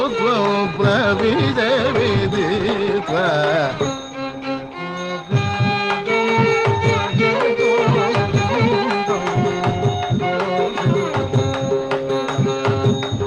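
No technical fault can be heard anywhere in the clip.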